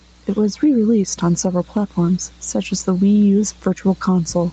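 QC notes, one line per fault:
Throughout, gain pumping: the input gain is likely set far too high, so a fast limiter clamps down on every loud stretch of speech, a swing of around 5 dB. Loud and soft parts end up closer in level, leaving the speech squashed.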